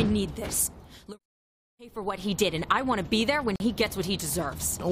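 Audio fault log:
3.56 to 3.60 s, gap at a join of encoded pieces: separately encoded pieces were joined without trimming the encoder's start-up delay and final-frame padding, so a silence of about 43 ms opens in continuous sound, its edges smeared by the codec, before the sound resumes where it stopped.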